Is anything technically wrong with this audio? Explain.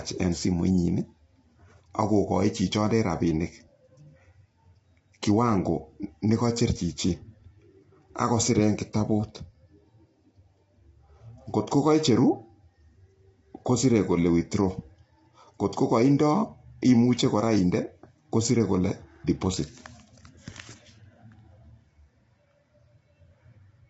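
Yes. Across the whole clip the speech sounds rough and grainy, and the top end stops abruptly at about 7.8 kHz. The likely cause is low-delay AAC compression, the AAC-ELD kind used for video calls. Its very short frames separate pitch harmonics poorly and spend bits inefficiently. The damage here fits a bitrate of around 24 kbps. Noise fills the gaps between harmonics, giving the voice its coarse texture, and nothing remains above the cut-off.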